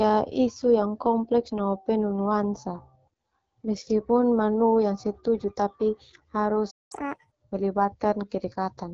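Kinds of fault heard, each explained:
AMR wideband (HD Voice) codec: throughout, the speech sounds rough and raspy with nothing above 7 kHz, which fits a low-rate mode such as 8.85 kbit/s.
Playback stall: from 6.70 to 6.92 s the speech drops out for about 0.2 s, likely because the player ran short of data, then resumes.
Catch-up at higher speed: from 6.92 to 7.31 s the backlog plays at 1.5 times speed, pitch raised about seven semitones, before returning to normal.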